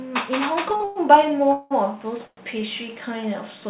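At 0.77 to 0.82 s, a short stall from a late packet holds the sound for 33 ms as a slight buzzy stretch. Playback then resumes from the same place with nothing lost. Call audio freezes follow at 0.84 to 0.98 s, 1.53 to 1.73 s and 2.27 to 2.39 s, lasting 118, 179 and 106 ms. Each is a fading buzz, and the last decays into 40 ms of silence. Packets were likely held up in transit so that the jitter buffer ran dry, and each time the audio continues where it stopped. Throughout, nothing is heard above 4 kHz, consistent with a G.711 A-law call path.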